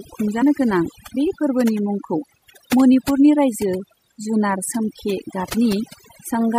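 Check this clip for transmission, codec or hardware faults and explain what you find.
Three faults are audible in this speech clip.

Overdone noise removal runs throughout. Bands near the noise floor are pushed nearly off, so the background twinkles.

Swirly, watery smearing also runs throughout. It is likely MP3 compression at a low bitrate, which zeroes weak frequency lines.

Compressed frames are skipped at 0.41 s, just before "गोनां बे फोरबोनि मुंखौ". About 50 ms of speech disappears, roughly two frames. Overlapping frames make the jump a soft smeared blip.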